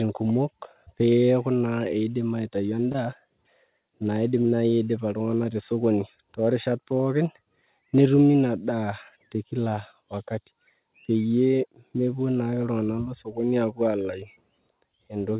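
Three short concealed packet losses show up in this speech, at 2.92–2.96 s, 4.42–4.46 s and 8.32–8.36 s. Each time about 20 ms of audio didn't reach the decoder in time, so the receiver stretched the last sound over the gap, carrying on its pitch or filling with shaped noise, then blended back into the real signal. You hear a quick smear or tiny wobble, all inside a narrowband call sound with nothing above 4 kHz.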